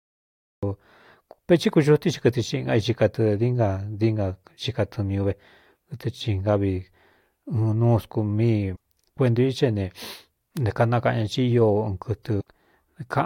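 Right at the top there's a cut-off start: from 0 to 0.63 s it's pure digital silence, and then the speech just appears partway through a sound. There's no attack building up and no fade-in. It sounds like the recording or stream kicked in late, so we got dropped into the middle of an utterance rather than catching its beginning.

Further in there are two short bursts of damaged data in the compressed stream. The first runs from 8.73 to 8.77 s, just before "kuentū i xá". The second runs from 12.37 to 12.41 s. Each is a quick glitch about 40 ms long. What's going on is that a bit of the encoded data got corrupted, so the decoder couldn't read those frames properly, lost its footing and had to hunt for the next valid frame header before playback came back clean.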